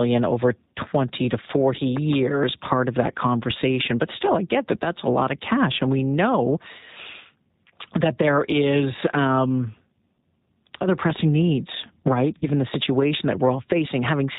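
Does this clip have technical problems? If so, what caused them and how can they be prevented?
Yes. Throughout, the speech sounds slightly rough, synthetic and cut off above 4 kHz. This is the G.729 codec, which rebuilds each 10 ms frame from a filter, a pitch predictor and a few pulses at 8 kbit/s. A wider-band codec or a higher bitrate would avoid this.

From 1.97 to 2.15 s, two sharp pops stand about 15 dB above the speech, which continues underneath. This loud pop is likely a voltage spike from a plug, switch or static discharge. Secure cables, quiet switching and grounding would prevent it.

At 12.38 to 12.45 s, the speech smears into a brief buzzy tone or coloured noise that fades, and then sounds weak or distorted as it resumes. This is VoIP packet loss concealed by the speech codec: about 40 ms of audio went missing, which fits two 20 ms packets, and the decoder extrapolated from its last frames while lowering the level. 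A more stable network, a jitter buffer or forward error correction would prevent it.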